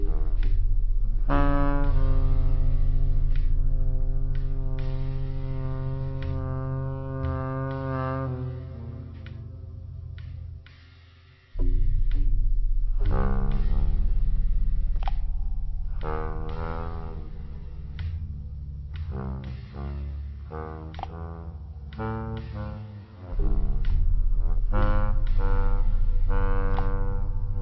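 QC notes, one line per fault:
Throughout, wrong sample rate: sound drags at about 0.36× speed and sits 17.6 semitones low, which fits 44.1 kHz material played back at 16 kHz.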